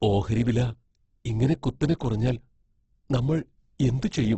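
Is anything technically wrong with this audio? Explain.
Yes. Throughout the speech there is heavy Opus compression damage, likely from the music-oriented CELT mode at a low bitrate, around 12 kbps. Nothing remains above 8.2 kHz, and starved bands are filled with folded or noise content, so the voice sounds rough, grainy and noisy, with few spectral holes and less swirling than MP3.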